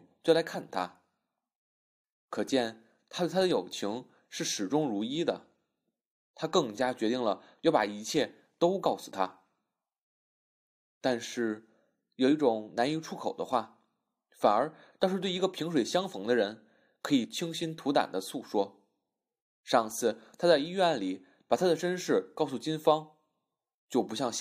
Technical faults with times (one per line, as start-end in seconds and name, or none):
8.85 damaged data in a compressed stream
21.78 damaged data in a compressed stream